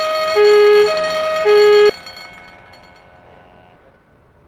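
A skip ahead at 1.89 to 1.91 s jumps playback forward with no fill. About a second of audio was dropped while later audio was already queued, so the two sides of the gap are joined almost directly and the sound lurches ahead.

A jitter buffer speed-up runs from 2.01 to 2.67 s at 110% speed, removing about 70 ms, and again from 3.55 to 4.44 s at 123%, removing about 200 ms. The buffer held surplus audio and trimmed pitch-period pieces repeatedly, so the sound hurries at unchanged pitch.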